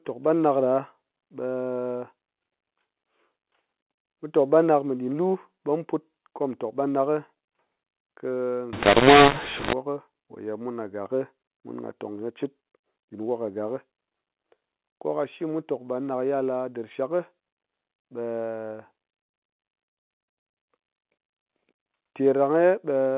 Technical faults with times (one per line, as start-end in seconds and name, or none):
8.73-9.73 mu-law and A-law mixed up